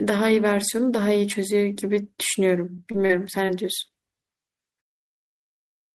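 Speech clip with short concealed packet loss: brief stretches of audio, about 20 ms at 2.75, 2.91 and 3.47 s and 40 ms at 3.06 s, arrived too late, so the receiver extrapolated the preceding sound and blended back, leaving quick smears or wobbles.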